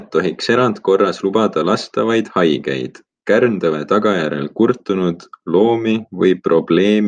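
No technical faults are audible.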